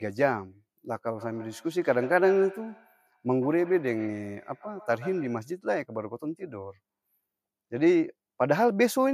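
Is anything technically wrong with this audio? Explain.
Yes. From 1.17 to 5.55 s there is feedback echo between two devices. Two devices in the same room are on one call, and one plays back what the other's microphone sent. That microphone picks the playback up again, and its echo canceller ignores it because the sound came from the other device's speaker. The speech comes round again roughly every 150 ms, each pass thinner and more ringing, peaking at about 18 dB below the speech.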